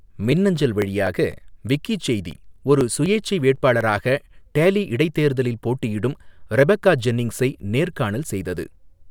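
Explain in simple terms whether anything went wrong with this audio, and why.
From 0.08 s to 4.06 s, the speech has small regular ticks about every quarter second, roughly fifteen in all. These are periodic USB or driver dropouts: a background task briefly stalls the audio path, skipping about a millisecond each time. Random crackle would be uneven, but these ticks are evenly spaced.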